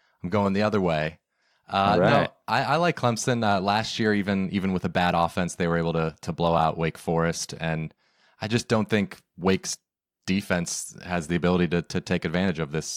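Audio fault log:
9.41 s, block of digital silence: a single sharp tick in the speech, too brief to register as a gap. For about 1.5 ms the signal drops straight to zero and then jumps straight back, with no fade on either side. Each hard edge is a sudden step in the waveform, and the two steps fall so close together that they merge into one click. That short, clean hole fits a 64-sample block of output that was never filled in time.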